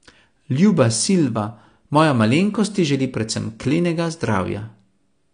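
From start to finish the speech sounds dull and smeared, with nothing above 9.8 kHz and a watery, fizzy texture on sibilants and held vowels. The likely cause is AAC compression at a low bitrate, around 32 kbps, where the encoder drops the top band and starves the rest of bits. A plain low-pass filter would leave the remaining spectrum clean. Here the band below the cut-off warbles as well, which is plainly audible codec damage.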